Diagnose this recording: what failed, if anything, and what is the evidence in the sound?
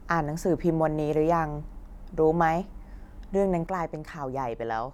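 There's a sudden gain jump at 3.67 s: the level drops by about 6 dB in a single step and stays down until the clip ends. The background noise falls right along with the speech, so this isn't the talker getting quieter. It's the whole signal being scaled at once, with no fade. The likely culprit is a digital gain setting applied without a ramp somewhere in processing, maybe a one-bit shift, which is exactly a 6 dB halving.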